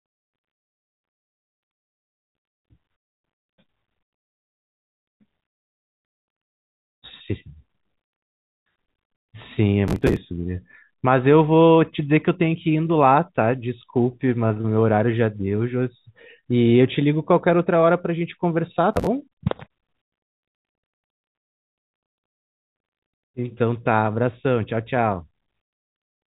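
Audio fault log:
9.88–10.16 s and 18.93–19.07 s: processor overload crackle. Dozens of missed buffers, likely around 5 ms each, were skipped, leaving gritty tearing crackle.
14.48–16.45 s: scattered short gaps. About seven brief losses, the longest near 30 ms, were patched by extending prior sound. Small ticks and hiccups result.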